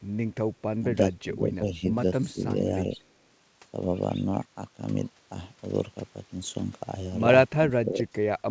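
At 0.78 to 0.9 s, 1.22 to 1.93 s, 2.32 to 2.43 s and 7.67 to 8.08 s the speech dips in level, most likely speech suppressed in double talk: the echo canceller mistook the near talker for loudspeaker echo and turned both down. The first three dips are shallow, around 10 to 15 dB. The last cuts nearly out, about 30 dB. The waveform shows sudden notches in the envelope, and the spectrogram shows faded bands across the whole band, which ends at 8 kHz from the call codec.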